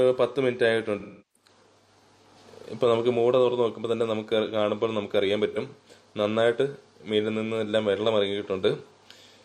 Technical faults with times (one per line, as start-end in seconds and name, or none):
1.00-1.48 AAC frame loss with concealment
5.51-5.57 AAC frame loss with concealment